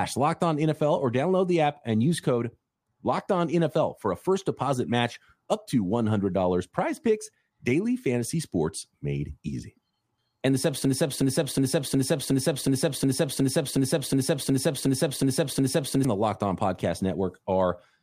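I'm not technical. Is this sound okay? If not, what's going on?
No. From 10.85 s to 16.05 s, this speech clip falls into a broken-record loop. A single fragment about 0.36 seconds long plays again and again, back to back, 14 times, so the same short sound stutters for about five seconds. The likely cause is the playback or streaming chain stalling and resending the last piece it held. Whatever should have been heard during those five seconds is lost, and normal sound only returns at 16.05 s.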